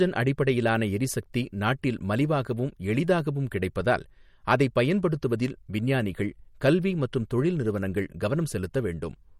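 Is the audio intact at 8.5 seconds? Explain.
No. At 8.5 seconds the speech carries the same damage heard across the whole clip, which is likely MP3 compression. Nothing sounds above 17.2 kHz, and the weaker frequency components flicker on and off from frame to frame, giving a watery, swirly texture with metallic chirps on s sounds and smeared onsets, which fits a low bitrate near 48 kbps. A plain low-pass filter would remove the same top band but would not cause that flickering.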